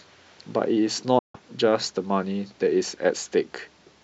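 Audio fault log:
1.19–1.40 s, Bluetooth dropout: the speech cuts to abrupt silence, then resumes further along as though it kept playing, likely late wireless packets discarded, unlike a stall that picks up where it stopped.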